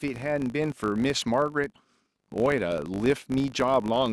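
Right from the start and running the whole way through, there's a filter restarted on every block. The filter drops its memory at each block boundary and begins again from silence, so every block opens with a tiny transient. Those clicks land 50 times a second, which points to blocks about 20 ms long, and together they make a steady 50 Hz buzz under the speech that gets louder and quieter along with it.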